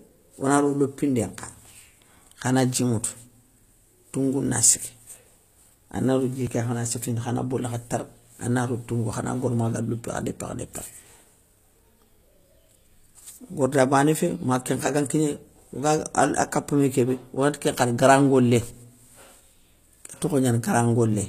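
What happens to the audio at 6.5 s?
At 6.47 s the sound jumps ahead by a few milliseconds. This is a dropped buffer (overrun), likely from samples being overwritten before the program read them, so the two sides are spliced directly. Unlike a dropout, no silent gap is left, only the skip.

Around this moment, as throughout, HE-AAC compression is plainly audible. Its likely sign is treble rebuilt from lower bands rather than coded, with nothing above 14.9 kHz, consistent with about 24 kbps. Sibilants sound gritty and metallic, not merely dull as with a simple low-pass filter.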